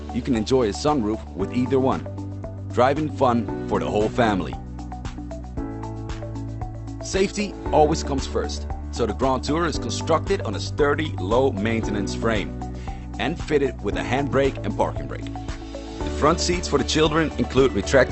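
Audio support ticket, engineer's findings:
CD scratch ticks, 14.06–15.32 s: seven very brief ticks, roughly five per second. A disc blemish defeats error correction on each revolution. Spectrogram shows evenly spaced thin vertical lines.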